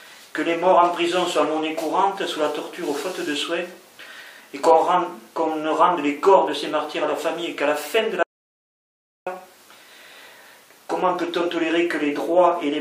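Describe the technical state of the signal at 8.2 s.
At 8.23 s the signal drops out to silence until 9.27 s. That is about 1.04 s of silence, with no room tone underneath. The sound cuts off abruptly and resumes mid-flow. The likely cause is a lost input while recording continued.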